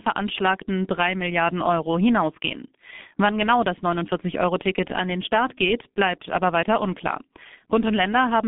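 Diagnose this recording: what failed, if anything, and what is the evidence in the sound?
The codec stage failed: G.723.1 coding is present throughout the speech. Nothing passes below 150 Hz or above 3.6 kHz, so it sounds muffled. Heavy coding damage leaves it hoarse with blurred consonants. That fits a rate near 6 kbit/s and a slowly updated voice model.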